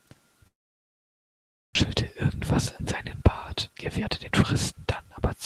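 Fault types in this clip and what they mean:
Long network dropout, 0.47 to 1.77 s: the sound breaks off, the receiver stretches the last fragment into a fading buzz that gives way to near-silence, and it resumes with about 0.86 s missing, likely because packets stopped arriving and the delay shifted by around 0.4 s.
Jitter buffer speed-up, 3.22 to 4.87 s, right after "in seinen": the receiver trims short pitch-period slices over and over to drain excess buffered audio, dropping roughly 0.3 s in total, so the speech runs at 115% speed with unchanged pitch and sounds hurried.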